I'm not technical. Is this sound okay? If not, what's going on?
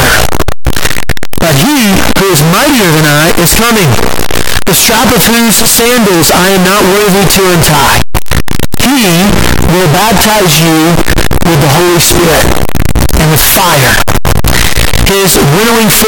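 No. From start to finish the sound is a harsh, buzzing distortion, and the quiet moments are just as loud as the loud ones. The likely cause is signed and unsigned mixed up: the 8-bit samples were read with the wrong sign convention, so every point where the waveform crosses its middle turns into a leap from one extreme to the other. The 8-bit format itself is fine; the problem is how those numbers were read.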